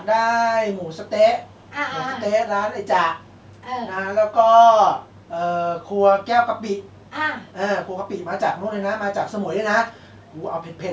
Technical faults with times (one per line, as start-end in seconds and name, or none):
1.46-1.70 echo leak
3.19-3.49 echo leak
5.08-5.26 echo leak
6.92-7.09 echo leak
9.93-10.39 echo leak